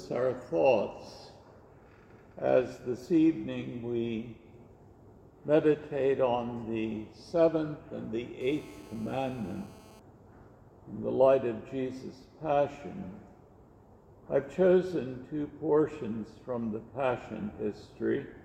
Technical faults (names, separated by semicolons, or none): GSM phone buzz